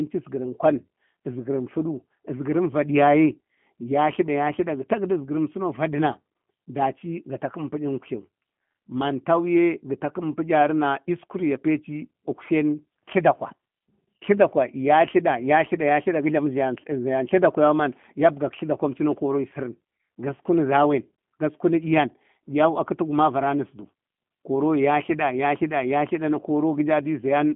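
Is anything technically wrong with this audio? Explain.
Yes. For the whole clip the speech carries G.729 codec damage. Everything above about 3.4 kHz and below 150 Hz is gone, giving the narrow telephone-line band, and the roughness points to the 8 kbit/s G.729A variant. The codec discards the waveform and resynthesises each 10 ms frame from a vocal tract filter, a pitch predictor and a few pulses, so the speech stays intelligible but sounds plainly rough, buzzy and slightly synthetic.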